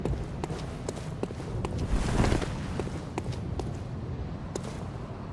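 No technical faults are audible.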